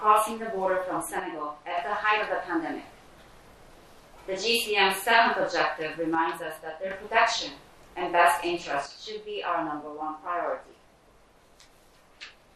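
From the start everything sounds dull and gurgly, with grainy, flickering highs: MP2 compression, likely a low-rate stream around 80 kbps. At 1.20 to 1.78 s, 6.15 to 6.91 s, and 8.86 s to the end, the level abruptly falls about 6 dB, likely one channel dropping out before the mono sum.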